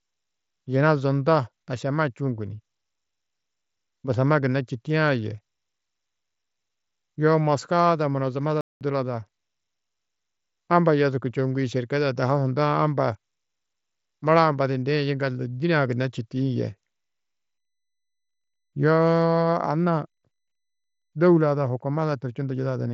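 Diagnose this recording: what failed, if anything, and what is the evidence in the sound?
The speech cuts out abruptly just after "ada munozamada", with dead silence from 8.61 to 8.81 s, about 0.2 s, before carrying on. This is a playback stall, most likely at the playback or buffer stage: the player ran short of data or its thread was held up, so the output fell silent until it recovered. The audio throughout is band-limited, with nothing above about 8 kHz, which fits the mSBC Bluetooth headset path.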